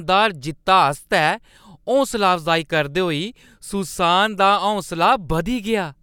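No technical faults are audible anywhere in the speech recording.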